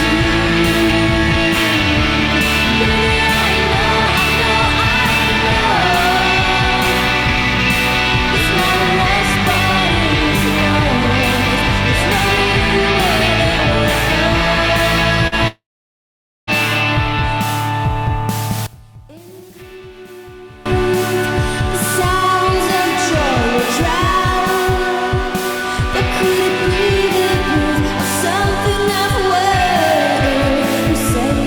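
At 15.27 to 15.35 s there is a short concealed packet loss. About 40 ms of audio arrived too late to decode. The receiver extended the preceding sound across the gap and then blended back. The result is a brief smear or wobble.

From 15.48 to 16.50 s the sound cuts out for about a second. This is likely a long network dropout. The last sound carries on as a fading buzz or hiss for a short while. Then about 0.86 s of near silence follows. The audio resumes with that second missing.

Between 18.66 and 20.66 s the level falls by about 22 dB. What remains sounds faint, with the centre largely gone. The likely cause is one channel inverted. With one channel's polarity flipped, the shared content cancels when the two channels are summed to mono, and only their difference survives.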